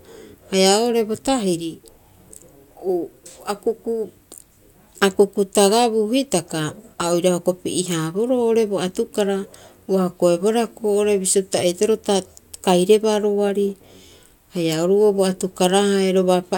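No technical faults can be heard anywhere in this speech recording. Nothing in it calls for a timestamp or a note on what went wrong.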